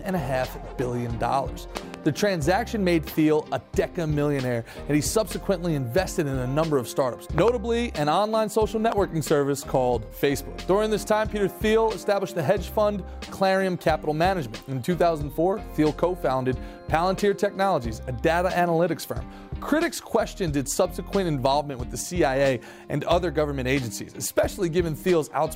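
A loud pop interrupts the audio three times: a double pop at 1.77 to 1.96 s, about 15 dB above the signal; another double at 7.38 to 7.50 s, about 20 dB; and a single at 8.92 to 8.94 s, likely from electrical transients such as switching or static.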